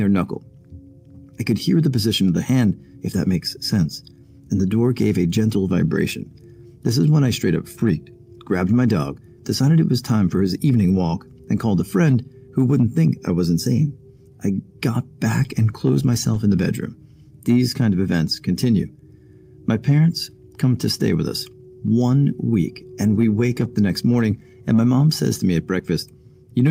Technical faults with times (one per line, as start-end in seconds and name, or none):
none